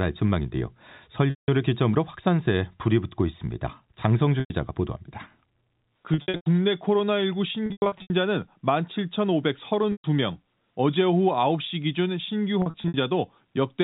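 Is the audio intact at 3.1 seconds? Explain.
Yes, at 3.1 seconds the speech runs on without any fault, carried through the telephone coding's narrow band with nothing broken or missing.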